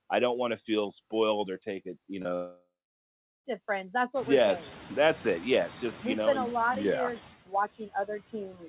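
Throughout the clip there are noise suppressor artifacts. The suppressor pulls the steady background down by about 15 dB frame by frame, so the residue sinks between phrases and swells under the speech, and the room noise rises around 4 s.

At 2.22 s, right after "or take it you", comes a short concealed packet loss lasting to 2.27 s. About 20 ms of audio never arrived, and the receiver extrapolated the preceding sound to cover roughly 26 ms before crossfading back. It is heard as a brief smear or wobble.

Moments later, from 2.35 to 3.46 s, the sound breaks off for about 1.1 s, most likely a long network dropout. The concealment first stretches the last sound into a decaying buzz or hiss, then about 0.7 s of near-silence follows before audio resumes with the gap's content simply missing.

Near the end, speech is cut by the noise suppressor from 7.79 to 8.34 s, just after "lot of yeah years", and again from 8.51 to 8.69 s. 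Quiet speech fragments were treated as noise and lowered by up to about 11 dB, a tenth to a sixth of a second in each stretch, so they sound swallowed or faint. All of this sits within the 4 kHz bandwidth of the G.711 call path.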